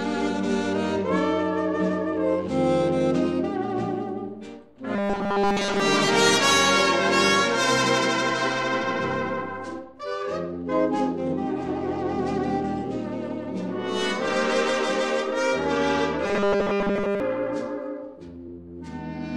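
From 4.96 to 5.80 s and again from 16.26 to 17.20 s, the sound turns into a rigid metallic buzz at 200 Hz: robotic sound from repeated short buffers. The likely cause is audio arriving too seldom, with essentially every 5 ms segment replayed in place of new material.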